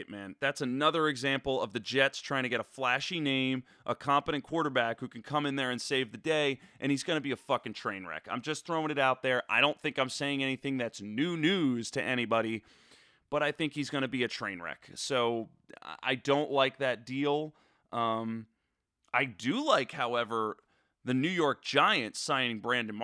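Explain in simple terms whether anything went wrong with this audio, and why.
Nothing went wrong; no faults can be heard anywhere.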